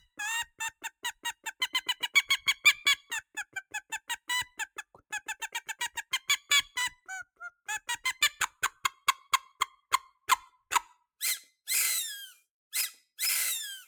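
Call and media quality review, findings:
Sound cut by the noise suppressor, 0.47–1.61 s (about 19 dB, under half a second in total) and 4.76–5.12 s (about 9 dB): content misread as noise; spectrogram shows faded bands, waveform sagging envelope.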